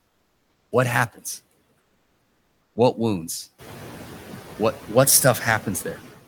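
A noise suppressor in this speech clip is cutting whatever it judges to be steady noise by about 16 dB frame by frame, throughout the recording, so the background sinks in the gaps and swells back under speech. The room noise rises by about 11 dB around 3.5 s. From 0 to 0.71 s, the sender appears to have stopped transmitting while no speech was detected, likely through Opus discontinuous transmission, and the receiver filled the gap with comfort noise in place of the background. The result is a smoother noise about 4 dB quieter than the real room sound that follows.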